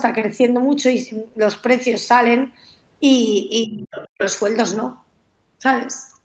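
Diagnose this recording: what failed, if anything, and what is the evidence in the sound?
Between 3.65 and 4.21 s the talker's speech sinks sharply, falling by roughly 40 dB at its deepest and staying pulled down for about half a second in total. This points to the call processing stage, most likely speech suppressed in double talk. While both ends were active, the echo canceller could not tell the near talker apart from the loudspeaker echo, so its suppressor attenuated everything in the microphone signal, including the wanted voice.

From 3.91 to 4.25 s a second, fainter voice sits under the talker, roughly 15 dB below the main speech. It overlaps the tail of the dip and outlasts it slightly. This also belongs to the call processing stage and is likely the other side's voice leaking through. The far-end audio played from the device's loudspeaker reached the microphone, and the echo canceller left a residual of it uncancelled, which then passed through the Opus path and its 8 kHz bandwidth limit with the rest of the signal.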